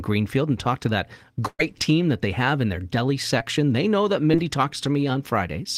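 A burst of packet loss runs from 1.47 to 1.61 s, between "and talk to that" and "team that they have". The receiver stretches the last sound for about 114 ms, fading it out, then drops 40 ms into silence. When the audio resumes, 120 ms of speech is gone.

Short concealed packet loss appears at 3.39 to 3.42 s after "have in their deli", and at 4.32 to 4.35 s after "know that". Each time, 20 ms never arrived. The decoder extended the preceding sound for 10 ms and 16 ms respectively, then blended back into the real audio, leaving a brief smear.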